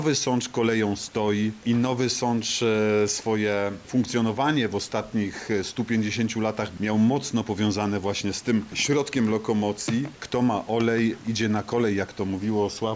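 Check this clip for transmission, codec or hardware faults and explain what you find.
One processing fault is present. Resampler restarted on every block, 7.75 to 10.5 s: each 250 ms block was converted without its neighbours' samples, leaving small edge errors heard as regular ticks at 4 Hz.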